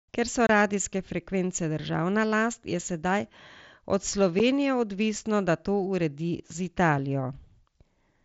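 Unconcealed Bluetooth headset packet loss: voice packets travelling between the headset and the phone went missing, and nothing rebuilt them. Silence or an idle pattern was passed through in their place. The first gap runs from 0.47 to 0.49 s. It lasts about 22.5 ms, which fits three consecutive packets of 7.5 ms. The second, at 4.39 s, lasts 7.5 ms and fits a single packet. Each one cuts a short hole into the speech with abrupt edges, carried over an mSBC wideband link.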